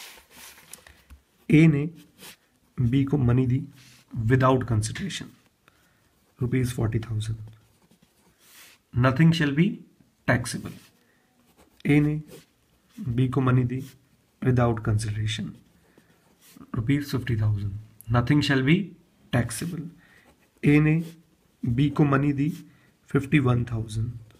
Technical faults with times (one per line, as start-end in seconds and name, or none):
none